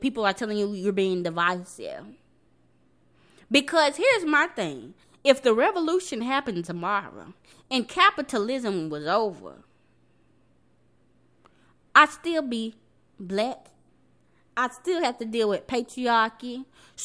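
No technical faults can be heard anywhere in this speech recording. There is nothing in it that calls for a fault description.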